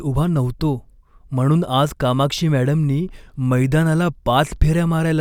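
No technical faults are audible.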